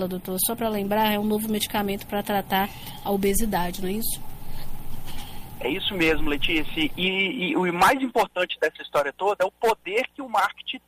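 Nothing stood out as a technical fault on listening.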